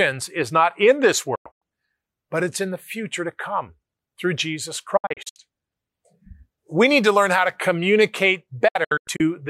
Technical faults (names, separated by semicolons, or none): digital broadcast dropout